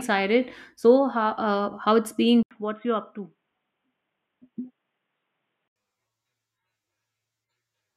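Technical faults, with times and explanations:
2.43–5.76 s, input switched to a poorer device: after an 80 ms gap the speech turns boxy, slightly quieter and faintly noisier, likely because a narrowband microphone took over. The spectrogram shows a hard ceiling at 3.8 kHz, and the waveform shows a brief dropout and a smaller envelope.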